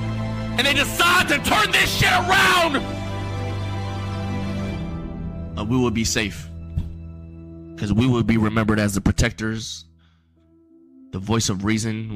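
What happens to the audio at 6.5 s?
Nothing goes wrong at 6.5 s; the audio plays through that moment intact, with no dropout, click or other fault.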